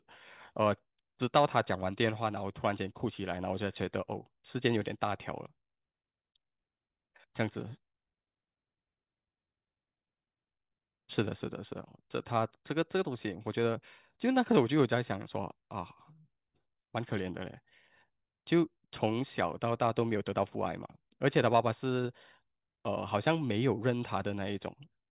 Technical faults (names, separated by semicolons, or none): none